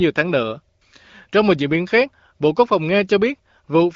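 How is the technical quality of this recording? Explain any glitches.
The technical quality is good, with no glitches to explain.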